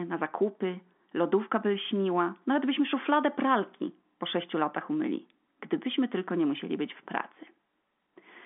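Speech over a telephone line, with no faults heard.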